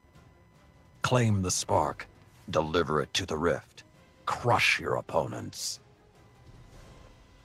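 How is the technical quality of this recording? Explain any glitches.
The recording carries a faint interference fault from start to finish. Computer activity noise runs throughout: shifting processor, graphics or mouse load disturbs the audio circuit's shared ground, leaving a quiet buzz pulsing near 1 kHz, roughly 40 dB below the sound, tracking the machine's activity rather than the audio. A spectrogram would show a thin comb of lines spaced about 1 kHz apart that ignore the sound's own structure.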